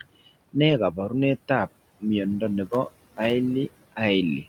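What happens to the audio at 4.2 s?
Noise suppressor artifacts run through 4.2 s, as across the whole clip: room noise drops about 20 dB between words, leaving a patchy, speckled spectrogram floor.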